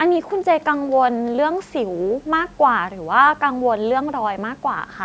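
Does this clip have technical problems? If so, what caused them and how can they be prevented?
No, there are no technical problems in this speech clip. It has passed through a call's microphone processing, which trims the lowest bass and leaves nothing above 8 kHz, as is normal for that path.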